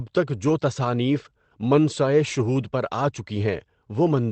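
No technical faults are audible.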